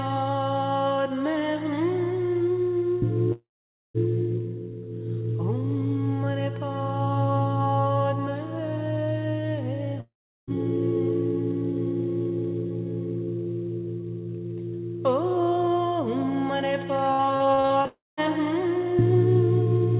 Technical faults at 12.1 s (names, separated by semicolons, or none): none